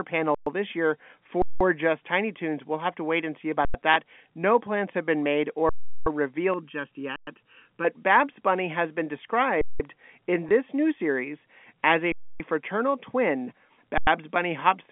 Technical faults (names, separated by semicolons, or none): underrun with held sample; packet loss with last packet repeated; channel delay (comb filtering)